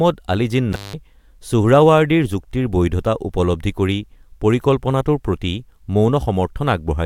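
A speech recording with an intermittent contact fault: between 0.72 and 0.94 s the signal drops out for about 182 ms, as a loose plug or cable momentarily breaks the connection. Crackle marks both edges of the gap, and a faint hiss remains while the line is open. That crackle and residual hiss distinguish it from a digital dropout or packet loss, which leaves clean silence or a smooth concealment with no scratchy contact noise.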